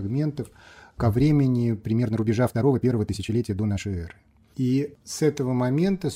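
The audio contains a time-stretched section from 1.88 to 3.88 s, where the pace jumps to about 1.71 times normal and sounds rushed, with pitch unchanged. The likely cause is software shortening that span by dropping short pieces. A spectrogram shows events squeezed closer in time at the same frequencies, and the waveform's envelope looks denser there.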